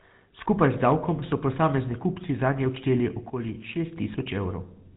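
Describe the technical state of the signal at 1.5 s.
At 1.5 s the speech sounds buzzy and gravelly, with nothing above about 3.8 kHz. This is GSM full-rate codec damage, present throughout the clip. The codec models the vocal tract and drives it with sparse, regular pulses, which fits a 13 kbps channel.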